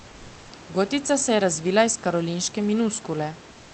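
At 3.51 s the room background, about 26 dB below the loudest speech, gives way to a steady, featureless hiss about 2 dB quieter that lasts to the end at 3.73 s. This is comfort noise in place of the background, likely from Opus discontinuous transmission halting the stream during silence.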